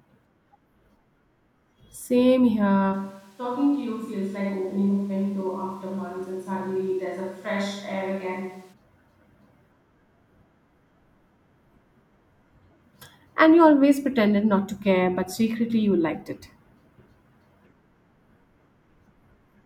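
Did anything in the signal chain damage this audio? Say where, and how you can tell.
Yes. From 2.95 s to 8.7 s the speech suddenly turns roomy and hollow, loses bass, drops about 5 dB, and room noise rises to roughly 30 dB below the speech before it abruptly reverts. At capture, this is likely a switch to a distant microphone.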